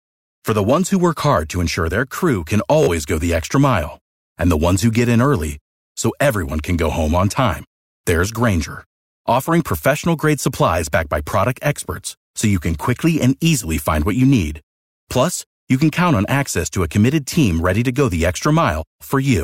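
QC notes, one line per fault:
2.83–2.88 s, Bluetooth stutter: lost packets made the receiver replay its last buffer after "ensure their crew can", giving a brief buzz before sound resumes 43.5 ms further on.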